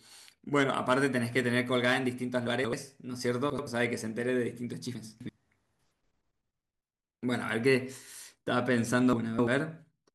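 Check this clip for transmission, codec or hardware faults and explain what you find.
The speech has chunks out of order four times: 2.48 to 2.73 s, 3.50 to 3.67 s, 4.95 to 5.29 s, and 9.13 to 9.47 s. Each block is about 85 ms long. A late block plays one to three blocks after its place. The result is a brief jumbled stretch.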